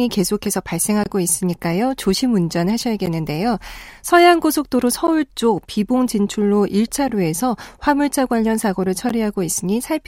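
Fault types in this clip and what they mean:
Gap at a join of encoded pieces: separately encoded segments were joined without trimming the encoder delay and end padding, so the speech drops briefly to silence every 2 seconds. The first gap, 1.04 to 1.06 s, lasts 23 ms, and those at 3.06, 5.07, 7.08 and 9.09 s last 11 ms each. A waveform shows each as a flat notch with smeared edges. On a spectrogram each is a thin vertical blank stripe across all frequencies.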